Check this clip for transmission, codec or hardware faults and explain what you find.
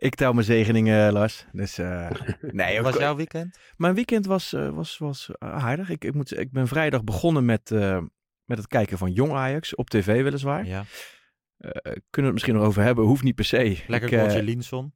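The speech signal holds steady throughout, with nothing audible that points to a technical fault.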